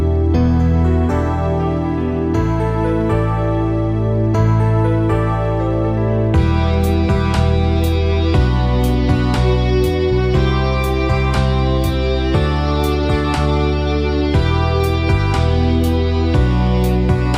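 Nothing goes wrong anywhere in the audio, so there's nothing here to point out.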